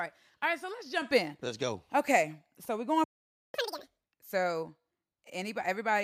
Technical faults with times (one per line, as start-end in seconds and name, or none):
1.02 microphone volume stepped up
3.04-3.54 playback stall
3.54-4.04 catch-up at higher speed